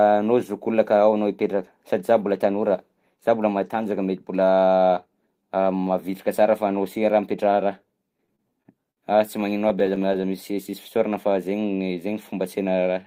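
Packets reaching the receiver late, or more slowly than they were being played out, let the jitter buffer run dry repeatedly in this speech recording, producing repeated stalls (stutter) in two bursts. Between 8.17 and 8.99 s there are five stalls, the longest about 58 ms, where the receiver stretches the last sound to cover roughly 136 ms, about 17% of that stretch. From 9.41 to 10.25 s ten shorter stalls, none over about 19 ms, fill around 104 ms, about 12% of the span. Nothing is lost in either burst, but the speech drags and hiccups. Right afterward the buffer was building back a reserve, so a jitter buffer slow-down from 10.52 to 11.10 s repeats individual pitch periods and bits of pause to add 38 ms. Playback runs at 95% speed with unchanged pitch, and the sounds in that stretch come out slightly drawn out.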